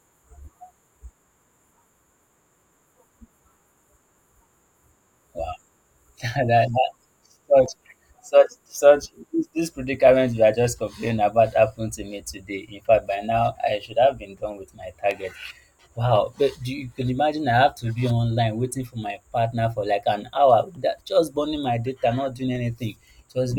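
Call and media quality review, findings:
Clock drift buffer slips, 0.20–22.56 s: regular click in the speech every 1.49 s, around fifteen in all. Likely cause: two devices on independent clocks, mismatch on the order of 100 ppm. The buffer between them slowly fills or drains until a small block of samples, a handful each time, is dropped or repeated. Probable component: the capture/playback interface or resampler lacking drift compensation.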